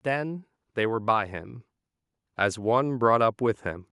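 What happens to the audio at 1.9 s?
Nothing goes wrong at 1.9 s; the speech runs straight through that moment with no dropout, click, glitch or other fault.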